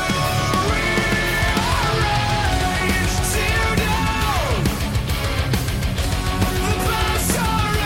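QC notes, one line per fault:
Nothing stood out on listening to this audio.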